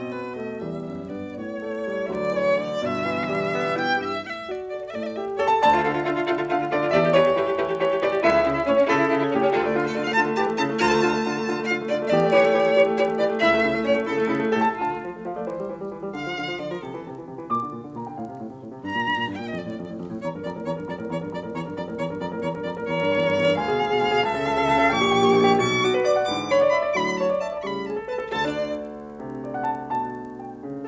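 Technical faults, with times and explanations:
Throughout: resampler restarted on every block. A steady 20 Hz tick runs under the music, which fits a converter that handles 50 ms blocks one at a time, here most likely going from 44.1 kHz down to 16 kHz. At each block edge the filter works without the true neighbouring samples, so it leaves a small error at every boundary. These errors recur at the block rate as a buzzy ticking that follows the signal and drops away in silence.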